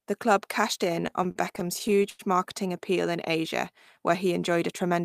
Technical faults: repeated stalls (stutter)

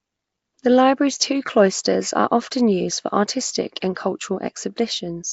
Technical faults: Nellymoser compression

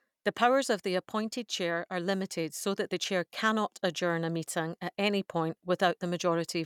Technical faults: none

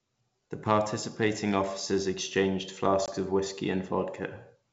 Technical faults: packet loss on an ADPCM call

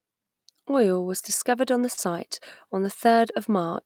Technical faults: short concealed packet loss; lost packet rebuilt from error correction

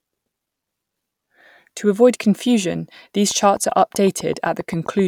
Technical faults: train of clicks

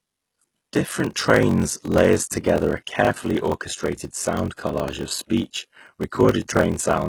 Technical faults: HE-AAC compression; block size mismatch (padded)

